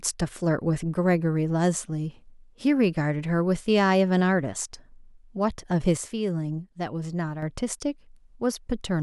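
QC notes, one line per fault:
5.97–7.42 s, sudden gain jump: the digital gain was likely switched in a single sample step with no ramp, cutting the signal by about 6 dB, then restored just as abruptly at 7.42 s. Because the change acts on the whole mix, the speech and the background noise drop together and return together. The level steps down and back up as a block rather than fading, and the noise floor shifts in step with the speech.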